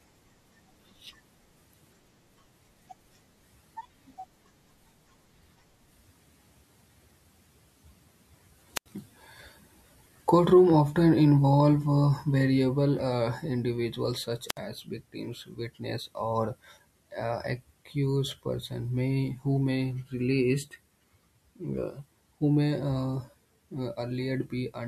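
A wireless microphone squelch dropout occurs at 8.75 to 8.86 s, and again at 14.48 to 14.58 s. In each, the analogue FM radio link fades so far that the receiver's squelch shuts the output off rather than pass raw static. A short burst of hiss gives way to a hole of near silence, about 85 ms the first time and about 65 ms the second, before the speech cuts back in.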